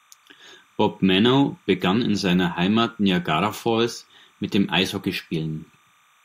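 It's a speech clip with timecode bleed running the whole way through: a faint chirpy warble flipping between roughly 1 and 2 kHz, sitting about 40 dB under the speech. The rhythm fits 29.97 fps linear timecode leaking in from a neighbouring track or cable.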